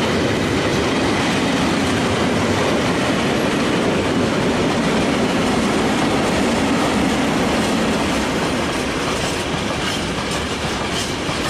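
Nothing stood out as technically wrong on listening to this audio.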